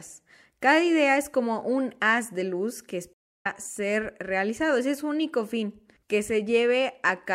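At 3.13 s, right after "haz de luz que", a stream reconnect cuts in: about 316 ms of silence, then the speech picks up roughly 0.2 s further on at "ser realizado".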